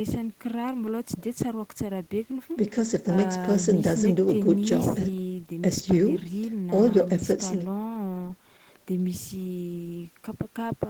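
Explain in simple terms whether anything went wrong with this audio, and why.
Listening to this speech recording, nothing stood out as having gone wrong at any point.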